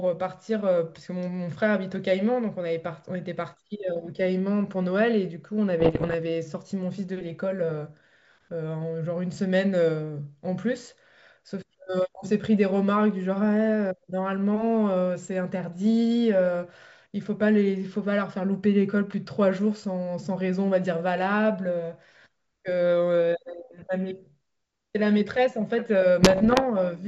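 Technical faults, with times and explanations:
5.80–6.15 s and 26.22–26.65 s, bit errors on an ADPCM link: pops and rough, gritty bursts with sudden level jumps, as flipped bits (roughly 1.5 to 2 percent) throw the decoder's step size and predictor off, so each error rings on briefly.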